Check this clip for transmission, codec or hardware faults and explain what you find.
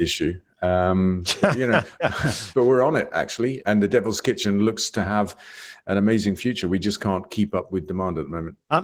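One codec fault runs through the whole speech clip. Opus voice compression, present throughout: the sound points to a low rate of about 16 kbps in hybrid mode, with linear prediction below 8 kHz and a coarse transform layer above. It sounds hoarse and slightly robotic, and a spectrogram shows smeared, blocky highs changing every 20 ms.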